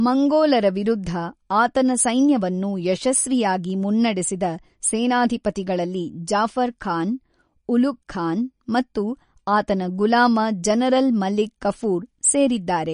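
Throughout the speech, plainly audible MP3 compression damage. Nothing sounds above 10.5 kHz, and bit starvation, likely at around 40 kbps, leaves watery, swirling artefacts.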